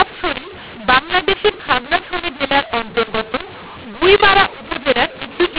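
Speech in G.711 telephone coding with mu-law and A-law mixed up throughout: A-law samples decoded as mu-law scramble levels, making the audio harsh and filling pauses with lifted noise.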